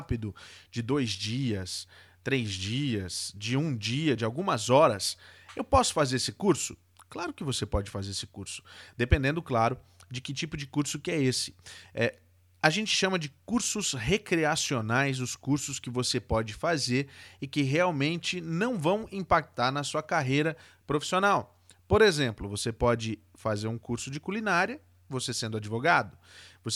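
No technical faults can be heard anywhere in the speech.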